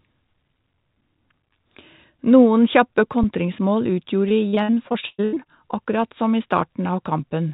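Speech carried over a call path whose band-limited, telephone-style sound with nothing above 4 kHz points to G.711 mu-law has two faults. At 3.23 s the output buffer ran dry, an underrun with held sample, for about 5.8 ms, which fits a 256-sample buffer. The converter froze on its last value, so the waveform briefly goes flat. Since essentially no audio was lost, playback picks up where it stopped and the dropout is nearly click-free. From 4.29 to 5.47 s, repeated packet loss over more than a dozen separate holes, the longest 116 ms, forced the receiver to conceal 486 ms, about 41% of that stretch, by extending the last sound. The speech turns choppy and robotic, with pieces missing.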